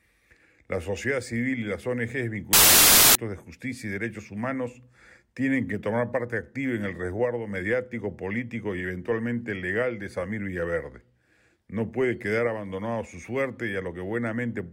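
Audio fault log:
2.53–3.15 s: samples built from the wrong bytes. The speech gives way to a blast of loud, harsh broadband noise for about 0.6 s. The bytes of each sample were joined wrongly. Their rapidly changing low bits became the large part of each value, so the sound turns to hiss.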